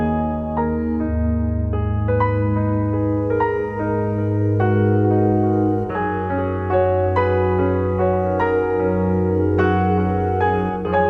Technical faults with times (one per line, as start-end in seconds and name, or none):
none